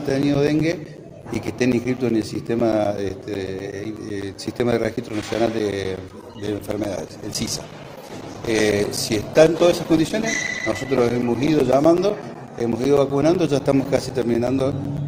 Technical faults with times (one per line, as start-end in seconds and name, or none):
0.09-15.07 periodic USB or driver dropouts
6.20-11.83 call bitrate drop